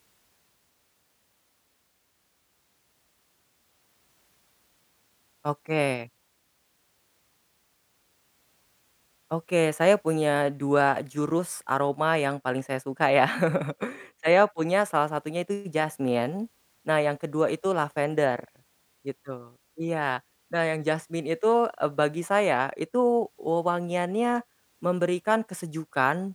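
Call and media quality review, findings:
Nothing stood out on listening to this speech recording.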